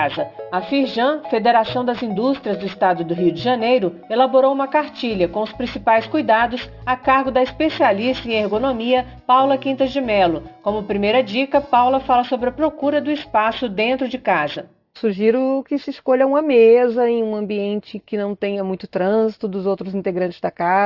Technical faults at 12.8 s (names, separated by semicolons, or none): aliasing